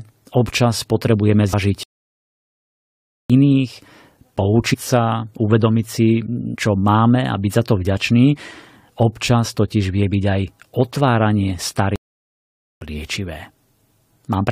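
At 1.52 s the speech jumps forward with a short smeared blip rather than a hard click, and the same happens at 4.73 to 4.75 s and 6.54 to 6.56 s. Each time roughly 70 ms of audio goes missing. This is compressed frames skipped: the decoder dropped about three whole frames, and the jump size fits frames of about 23 ms. Because neighbouring frames overlap, the join blurs instead of snapping.

From 1.83 to 3.30 s the speech cuts out mid-flow into silence for about 1.46 s, then resumes. A second gap runs from 11.96 to 12.81 s and lasts about 0.85 s. This is a playback stall, most likely the player running short of data or its thread being held up, so nothing reached the output until it recovered.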